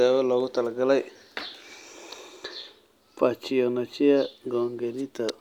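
No technical faults are audible anywhere in the speech recording.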